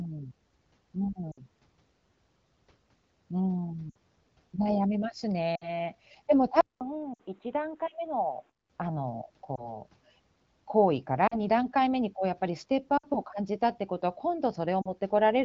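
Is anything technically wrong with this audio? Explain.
Yes, the audio has two faults. The wideband AMR coding itself sounds clean, which fits a rate around 12.65 kbit/s.

Lost AMR speech frames occur at 1.31, 3.89, 5.55, 7.14, 9.55, 11.27, 12.97 and 14.81 s, each lasting 20 to 60 ms. The decoder fills each gap by repeating the last good pitch and vocal-tract settings at falling gain. You hear brief warbles or smeared dips. A spectrogram shows harmonics frozen and fading, and the waveform envelope sags.

Input switched to a poorer device from 6.61 to 8.70 s, likely a change to another microphone or a headset call profile. It begins with about 200 ms of silence. The sound then turns dull and boxy, slightly quieter, with a new noise floor about 35 dB down. A spectrogram shows nothing above 4 kHz during this span.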